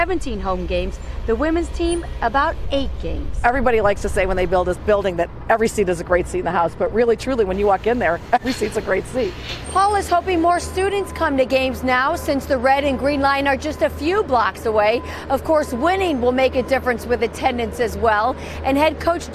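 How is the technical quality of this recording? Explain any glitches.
No glitches or technical faults can be heard anywhere in the recording, and the signal holds steady throughout.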